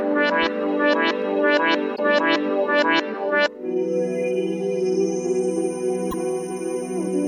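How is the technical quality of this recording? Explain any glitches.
Two brief glitches from damaged data in a compressed stream, at 1.92–1.99 s and 6.08–6.14 s. Corrupted frames make the decoder lose sync.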